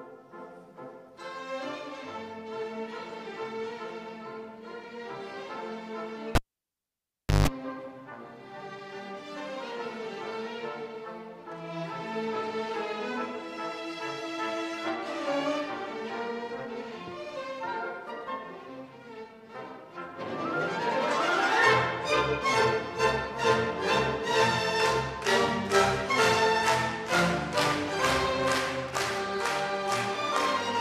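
At 6.35 s a live cable is pulled and plugged in. A pop cuts the sound to near silence for about 1.08 s. As the plug goes back, a 160 ms burst of 50 Hz mains buzz breaks through. Another pop restores the sound at 7.48 s.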